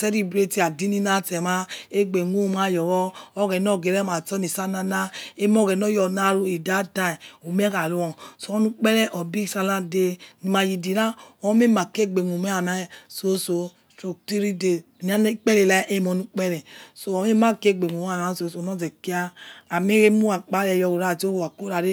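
No technical faults can be heard anywhere in this speech recording.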